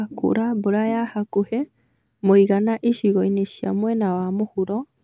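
Listening through the speech, nothing stood out as a technical fault at any point.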